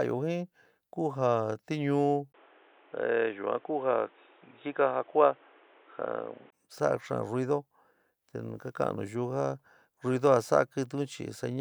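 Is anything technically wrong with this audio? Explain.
Yes. From 2.32 to 6.52 s the speech turns dull and boxy, with nothing above 3.8 kHz, a brief 20 ms gap at the switch, and a new background noise well below the speech, likely an input switched to a poorer device. The changed noise and the gap set it apart from plain filtering, and the level barely shifts.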